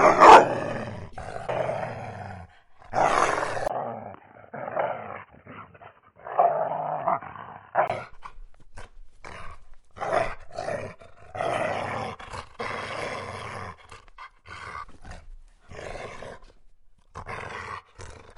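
A recording of sounds that turns dull and boxy from 3.68 to 7.90 s, with nothing above about 3.1 kHz, a brief 20 ms gap at the change, a level drop of roughly 5 dB, and a faint new noise floor far below the sound. The likely cause is an input switched to a poorer, narrower-band device mid-recording.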